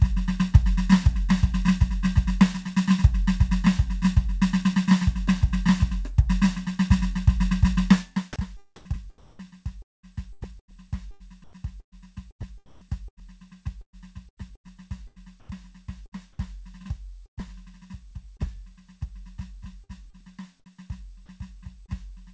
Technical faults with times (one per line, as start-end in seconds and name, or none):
8.76-16.15 sound chopped by the voice detector
12.66-12.81 comfort noise in place of the background
15.40-15.49 comfort noise in place of the background
17.26-18.56 repeated packet loss (robotic sound)
19.84-20.43 sound chopped by the voice detector
21.86-21.91 short concealed packet loss